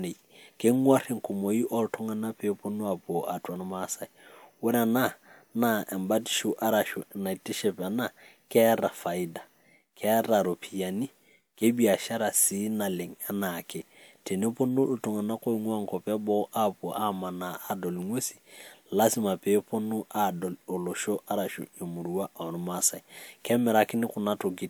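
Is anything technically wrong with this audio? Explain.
No, there is nothing technically wrong with this speech recording; no fault can be heard anywhere in the signal.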